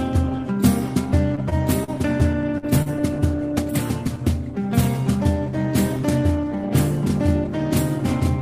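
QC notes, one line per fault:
1.35–2.89 s: repeated packet loss (robotic sound). Six short dropouts, the longest 45 ms, are each bridged by extending the preceding sound, covering about 11% of the stretch. The gaps come so close together that the audio turns choppy.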